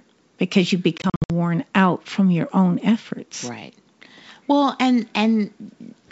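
From 0.98 to 1.31 s, between "because you" and "worn out from your", packet loss on the ADPCM call leaves hard-edged silent gaps totalling 200 ms, runs up to 60 ms, followed by brief distortion as the decoder's predictor resyncs.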